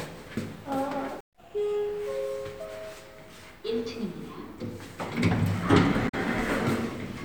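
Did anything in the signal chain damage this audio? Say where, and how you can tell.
Yes: damaged data in the compressed stream at the codec stage, 6.08 to 6.14 s. The decoder misreads the corrupted frames and loses sync, giving a brief glitch.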